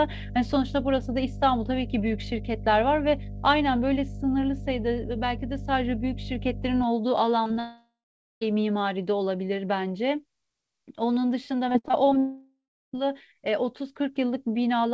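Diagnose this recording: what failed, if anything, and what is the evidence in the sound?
Analogue wiring: a ground loop or nearby transformer couples the 50 Hz power line into the signal. A steady hum sits roughly 10 dB below the speech from 0 to 6.8 s.

Network: short concealed packet loss at 7.44, 7.47 and 7.54 s. Each roughly 20 ms hole is patched by extending the previous sound, giving brief smears or wobbles.

Network: a likely long network dropout from 7.60 to 8.43 s, and again from 12.18 to 12.99 s. The concealment buzz fades to silence, about 0.5 s and 0.35 s respectively. The speech then resumes with those parts missing.

Network: repeated packet loss causes robotic sound from 11.69 to 12.15 s. Six gaps, the longest 58 ms, cover about a third of the span, making the speech choppy.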